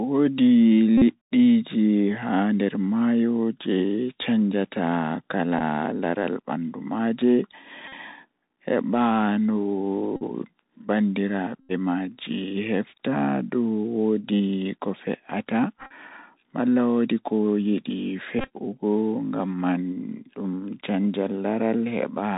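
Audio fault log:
throughout, Bluetooth CVSD headset codec: one-bit delta coding at 64 kHz leaves nothing above 4 kHz, with a granular hiss and scratchy s sounds where the adaptive step lags loud high sounds.
0.98, 5.59, 7.88, 10.16, 11.60, 15.78 and 18.39 s, Bluetooth headset packet repeated: lost packets are filled by decoding the previous packet again, so each 3.75 ms repeat gives a brief buzz near 267 Hz. These last from 15 to 90 ms, and the final two are broken up over about 0.12 s each.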